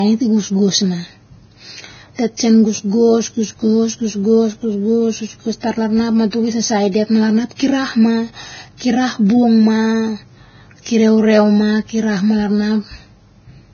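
From start to end the speech has nothing above 6.6 kHz, a flat ceiling on a spectrogram, with smeared, watery detail below it. This is likely low-bitrate audio saved at a high bitrate: a heavily compressed encode re-saved as large MP3, which cannot restore what was lost.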